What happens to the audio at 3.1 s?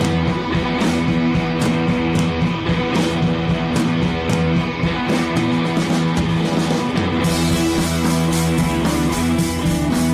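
Nothing goes wrong at 3.1 s; the audio plays through that moment intact, with no dropout, click or other fault.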